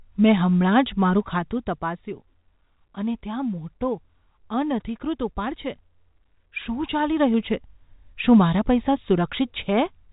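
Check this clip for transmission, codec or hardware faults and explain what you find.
Zipper noise shows up twice in this speech clip. From 1.11 to 2.13 s the level drops about 10 dB in coarse 2 dB steps, roughly five a second, then climbs back the same way from 6.74 to 7.68 s. With no smoothing between steps, each jump clicks, giving a ticking zip over the telephone-band audio.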